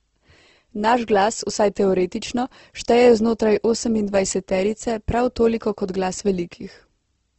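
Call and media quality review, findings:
Speech grainy and rough for the whole clip, nothing above 8.1 kHz; likely Opus compression in CELT mode, band energy kept but detail noise-filled, fits roughly 16 kbps.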